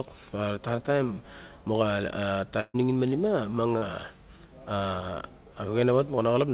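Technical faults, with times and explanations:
2.60–2.76 s, burst of packet loss: about 140 ms never arrived; the receiver stretched the last sound, fading it, then 20 ms of silence before audio resumed further on.
3.78–3.84 s, short concealed packet loss: about 40 ms went missing, and the decoder patched the hole by continuing the preceding sound, heard as a brief smear before rejoining.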